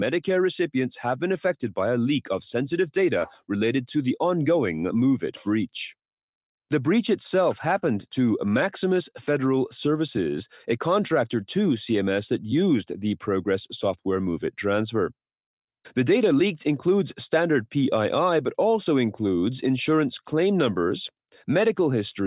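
No technical faults can be heard anywhere in this speech recording. There is no point in the audio that needs a timestamp or a closer look.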